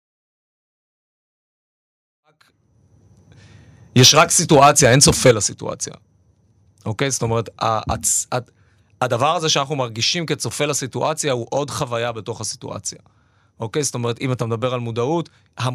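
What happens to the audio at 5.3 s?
Right at 5.31 s the level drops abruptly by about 8 dB, a microphone volume stepped down, likely the call software cutting the input gain in one go. That follows a stretch of microphone overload from 4.53 to 5.31 s, where peaks run about 7 dB too hot and get flattened, likely by the converter's ceiling, giving the loudest moments a harsh, crackly edge.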